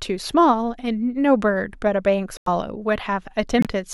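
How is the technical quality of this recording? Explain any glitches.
The speech has two brief holes from corrupt frame muted errors. The first runs 2.37 to 2.48 s and the second 3.59 to 3.67 s. In each, damaged compressed frames were rejected by the decoder and replaced with silence, cutting in abruptly. The gap lengths fit about four and three frames of roughly 28 ms. Because timing is preserved, the sound resumes on schedule rather than jumping ahead, which separates these from skipped or dropped audio.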